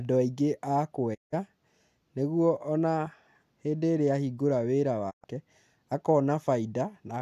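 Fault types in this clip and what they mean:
Digital broadcast dropout: the receiver stopped getting clean frames and muted, so the speech fades out over 20 ms into silent holes of 168 ms and 120 ms.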